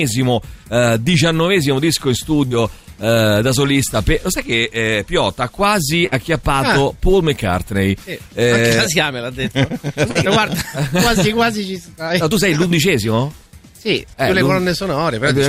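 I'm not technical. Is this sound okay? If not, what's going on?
No. Three moments of short concealed packet loss, at 2.47, 10.11 and 12.67 seconds, each leave a brief smear where the receiver patched about 35 milliseconds of sound that arrived too late.

At 6.07 seconds, a burst of packet loss leaves roughly 50 milliseconds of held, fading sound, then the audio jumps ahead, skipping a short piece.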